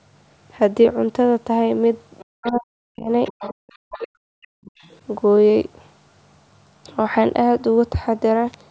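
From 2.19 to 2.52 s a faint second voice sits under the speech, the other side's voice leaking through, about 25 dB below the talker. Its likely cause is loudspeaker echo the canceller failed to subtract from the microphone. On a spectrogram it shows as weak, blurred harmonic traces unrelated to the main voice. From 2.24 to 3.09 s the talker's own speech is pulled down, speech suppressed in double talk: both sides were talking, and the canceller, likely unable to tell its talker from the echo, attenuated everything. The drops go as deep as roughly 40 dB and add up to most of a second, heard as words sinking or breaking into fragments. The waveform envelope shows abrupt notches, and the spectrogram shows the upper harmonics thinning out. The same pattern returns. From 3.25 to 3.72 s the leaking voice is stronger, about 15 dB under the speech, and from 3.50 to 4.21 s the talker is suppressed again, for around half a second in total. 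From 4.42 to 4.99 s a very faint leak, about 30 dB down, returns. Inside it, from 4.49 to 4.65 s, the background gated by the echo canceller drops the room sound by about 38 dB, a brief hole of silence. It appears as a near-empty gap on the spectrogram and a flattened stretch of waveform, against a band that already ends at 8 kHz from the call's microphone processing.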